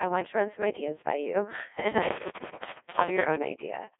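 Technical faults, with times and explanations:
Throughout: Codec 2 vocoder. The speech sounds robotic and buzzy, with heavy damage. The original waveform is gone. Only pitch, voicing, loudness and a rough spectral shape survive, and the decoder rebuilds the voice from sine waves. The sound is confined to roughly 0.3 to 3.6 kHz, and nothing is left above 3.8 kHz. The thin, synthetic quality fits a 1.2 kbit/s mode of this digital-radio codec.
2.03 to 3.25 s: intermittent contact. A loose cable or plug breaks the signal path for a moment. The sound cuts out abruptly, with crackle at the edges of the gap. The line stays open for about 0.72 s within this span, and faint hiss remains while it is open. Because the break is physical, the sound stops and restarts suddenly instead of fading.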